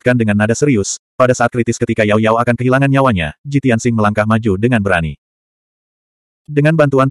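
Nothing in the recording stood out as a technical problem on listening.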